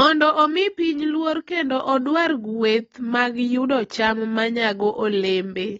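Throughout the speech, nothing is heard above 7.7 kHz, and sibilants and sustained sounds carry a warbling, fizzy smear. That texture is what separates it from a plain low-pass filter. The likely cause is AAC compression, with damage that fits roughly a 24 kbps AAC-LC encode.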